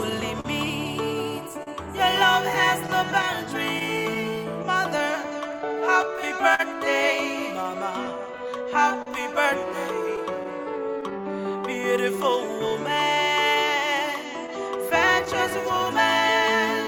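The audio carries clock drift between sender and receiver throughout: the sending clock runs roughly 3% slow, so the receiver's jitter buffer keeps draining and has to be topped up with invented material. Two short stalls from a late packet occur at 0.40 to 0.46 s and 1.63 to 1.69 s, where the receiver held the last sound for about 40 ms until the overdue packet arrived and then resumed exactly where it left off, losing nothing. On a waveform each shows as a brief stretch where one cycle pattern repeats with a small amplitude dip. A spectrogram shows a frozen, horizontally smeared slice with a faint comb-like buzz. From 1.55 s to 16.57 s there are repeated timing corrections: the receiver keeps inserting tiny repeated pieces so playback runs at about 99% speed, adding roughly 150 ms over that span. These edits all lengthen the sound and are spaced unevenly, heard at most as slight hiccups or a faintly sagging tempo. 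In a waveform they are small duplicated segments, and in a spectrogram they are thin stretched columns. Scattered short gaps also appear: about ten between 2.87 and 6.61 s (the longest around 40 ms), about three between 8.06 and 9.08 s, about four between 10.16 and 11.13 s, and about ten between 12.69 and 16.88 s (none longer than about 15 ms). Each was a lost or late packet patched by extending the previous sound, so the result is brief ticks and smears rather than silences. These appear as tiny flattened or repeated patches in the waveform and short vertical discontinuities in the spectrogram.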